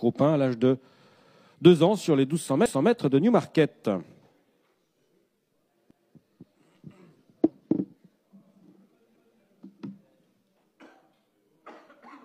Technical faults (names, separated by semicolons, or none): overlapping chunks; damaged data in a compressed stream